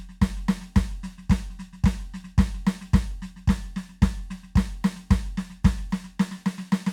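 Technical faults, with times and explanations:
No technical faults can be heard in this music. Nothing in the audio calls for a time or an explanation.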